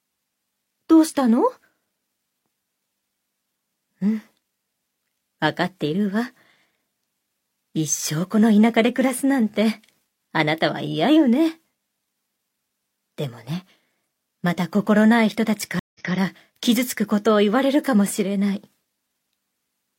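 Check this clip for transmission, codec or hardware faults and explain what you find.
One fault stands out: a stream reconnect between 15.79 and 16.13 s. The connection dropped, playback went silent for 152 ms, and a fresh decoder picked up mid-stream. The sound resumes 186 ms earlier than where it broke off, so a short stretch is heard twice, which fits a server resending a buffered burst after the reconnect. That backward jump and repetition is what separates it from a plain dropout, where audio simply goes missing and continues forward.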